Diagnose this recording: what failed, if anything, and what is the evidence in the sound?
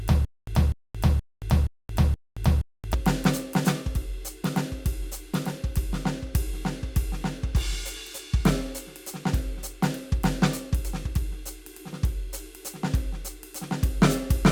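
Stutter with silent gaps runs from 0 to 2.94 s: a 248 ms burst of music returns every 473 ms, five times, with 225 ms of digital silence between. The waveform shows identical blocks separated by flat silent lines. The spectrogram shows matching slabs with blank columns. The likely cause is a stalled playback buffer replaying its last fragment at each retry, then running empty.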